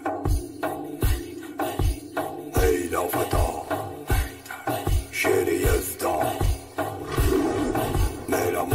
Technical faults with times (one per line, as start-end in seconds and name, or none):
0.00-8.74 channel delay (comb filtering)
3.64-3.68 chunks out of order
6.44-6.48 chunks out of order